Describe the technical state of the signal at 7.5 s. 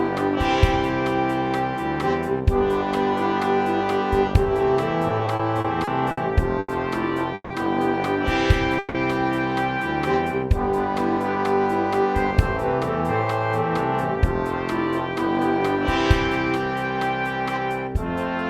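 At 7.5 s the sound hangs: from 7.34 to 7.52 s the last moment is stretched into a fading buzz, ending in about 30 ms of silence, then resumes where it stopped, now 160 ms late with nothing lost. This call audio freeze likely came from delayed packets draining the jitter buffer.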